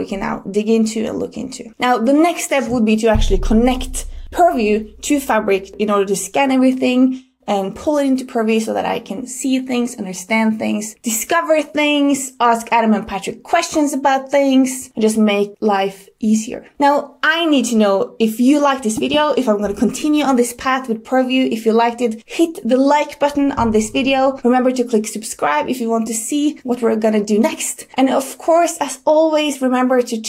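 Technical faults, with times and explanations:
26.07 s, repeated frames: a tiny 2.9 ms slice of audio gets played twice more right after itself, so the sound briefly catches and stutters before carrying on. That fits a single short compressed frame being delivered or written again and decoded each time. Each replay starts from the same point, so the joins don't line up with what should follow. You hear a quick hitch rather than a dropout, and the clip runs 5.8 ms longer than it should.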